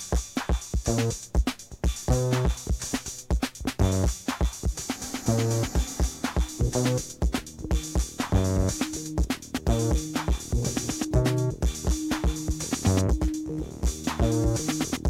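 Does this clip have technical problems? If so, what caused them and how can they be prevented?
No, no technical faults heard.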